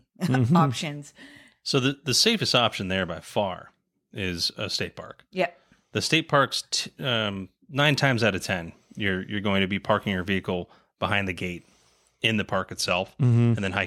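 Speech clip with a Bluetooth SBC bit pool drop from 12.72 to 13.85 s: the link appears to have cut the encoder's bit allowance, consistent with a fall from a bit pool of 28 to 13, near 102 kbps. Upper sub-bands lose their bits, so the treble dulls and gritty quantisation noise rises through the end.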